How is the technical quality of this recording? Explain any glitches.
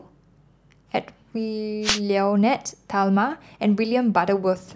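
One fault is audible in this speech recording. From 1.82 to 2.00 s there is a wireless microphone noise hit. The radio link from an analogue FM microphone fades for a moment, probably because reflected signals cancel the direct one. The receiver's noise floor rises as the signal drops. For about 0.18 s a brief swish of static sits over the voice.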